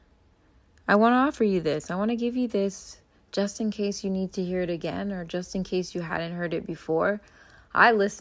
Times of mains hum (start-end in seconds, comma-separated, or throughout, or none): none